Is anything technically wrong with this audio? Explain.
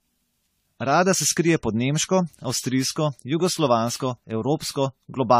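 Yes. Generation loss throughout. Speech sounds swirly and hollow, with blurred attacks and nothing above 16.4 kHz. Likely cause: about fifteen lossy AAC re-encodes stacking quantisation noise.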